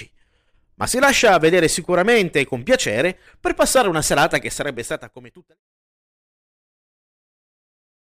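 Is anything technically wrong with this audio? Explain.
No, nothing technical in this speech needs fixing.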